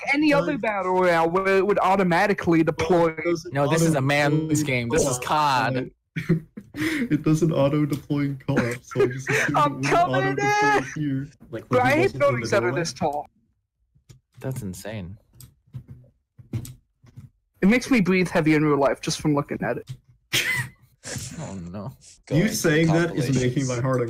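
Corrupt frames decoded appear at 4.95–5.06 s, 6.79–6.84 s, 9.24 s, 10.93–10.99 s and 18.06 s. Damaged compressed frames were played as-is, so misread codes throw energy into wrong frequencies. The result is brief chirps or noise bursts, loudest near 5 s at about −10 dBFS, rather than the gaps or smeared repeats of lost-frame concealment.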